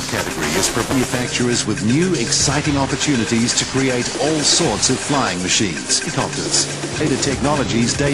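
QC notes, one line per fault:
0.00–1.23 s, buffer tearing: There's a gritty, robotic buzz at about 375 Hz riding on the sound from the start until it clears at 1.23 s. The writer and the hardware reader of the ring buffer have drifted so they cross inside every period, and a small slice of each buffer, roughly a seventh, replays audio from a lap earlier, only a few milliseconds old. Those hard joins repeat at the buffer rate, which fits a 128-sample buffer at 48 kHz.
0.92 s, 6.06 s, 7.00 s, damaged data in a compressed stream: Three short glitches, each under 20 ms, the first sitting inside the tearing stretch. At each one, a bit of the compressed stream is corrupted, so the decoder misreads the frame, loses sync and hunts for the next valid header.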